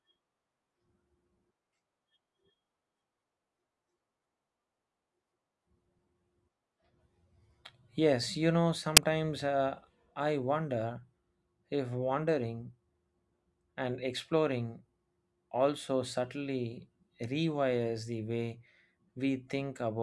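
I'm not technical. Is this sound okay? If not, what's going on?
No. At 8.97 s, between "you know" and "uh I wonder", the player reads the embedded cover picture as sound (file tags played as audio), producing a very brief, loud burst of static.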